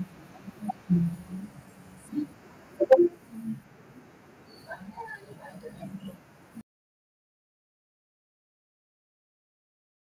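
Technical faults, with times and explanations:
2.92 to 2.94 s, microphone overload: The input level was likely set too high at this moment, so the loudest peak ran about 4 dB past the converter's ceiling and its tops were sheared flat. Roughly a fifth of the samples in this short stretch were clipped flat at the converter's limit, and that squared-off waveform adds a brief, harsh crackle to the speech right at the loudest point.
2.93 s, microphone volume stepped down: Reacting to that overloaded peak, the call software likely cut the device's input gain in a single jump of about 2 dB. Because it is one step rather than a smooth fade, the voice and the room sound behind it become quieter together and stay at the new level, a shift that lands right on the distorted instant.
6.61 s to the end, audio dropout to silence: The input feed was likely lost here, through a disconnect, a broken link or an accidental mute, while the recorder kept writing silence. 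The speech stops abruptly mid-flow and is followed by dead silence with no room tone, lasting through to the end of the clip, so everything that would have been heard after 6.61 s is missing.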